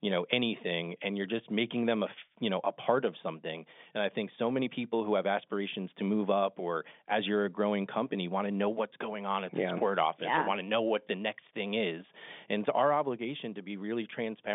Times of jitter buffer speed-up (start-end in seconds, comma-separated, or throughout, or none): none